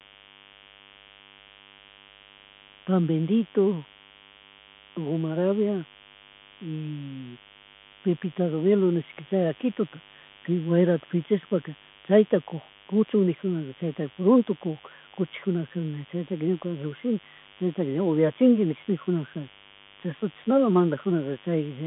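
A steady mains buzz runs through the whole recording. Switching spikes from the 50 Hz supply leak in, giving a raspy hum well below the speech.

The speech also passes through a Bluetooth CVSD headset codec, consistent with a 64 kbps narrowband link. Only about 150 Hz to 3.5 kHz survives, with nothing above 3.8 kHz. The adaptive steps audibly distort the speech and add granular hiss.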